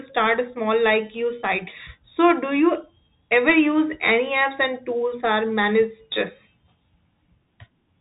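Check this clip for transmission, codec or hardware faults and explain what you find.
The clip has a codec fault. Throughout, the speech has passed through a Bluetooth CVSD headset codec: one-bit adaptive delta coding, consistent with a 64 kbps link. Nothing above 3.8 kHz survives, s sounds turn scratchy, and grainy hiss sits underneath.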